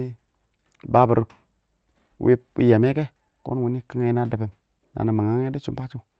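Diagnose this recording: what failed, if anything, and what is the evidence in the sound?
Nothing failed, and the sound carries no evidence of any fault along its call path.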